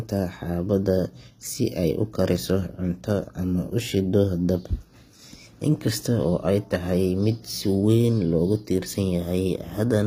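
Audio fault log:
Throughout: HE-AAC compression, likely at a low bitrate, with codec damage plainly audible across the speech. The upper band is not coded directly but rebuilt by copying lower-frequency content upward under a coarse envelope, so the treble keeps its brightness while its harmonics fail to align with those below the crossover. Sibilants come out gritty and metallic or lispy. Nothing is present above 15.5 kHz, and the degree of damage fits a rate near 24 kbps.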